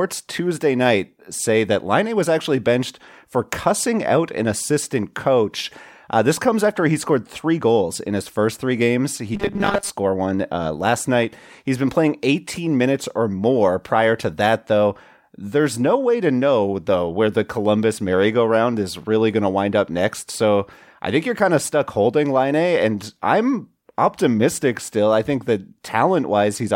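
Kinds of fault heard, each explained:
Robotic sound from repeated short buffers: from 9.35 to 9.9 s, before "one uh last night", speech becomes a rigid metallic 200 Hz buzz, likely a 5 ms slice replayed for most of it; spectrograms show flat, evenly spaced harmonics, waveforms one identical repeating cycle.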